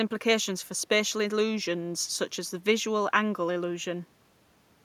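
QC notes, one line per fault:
No faults heard.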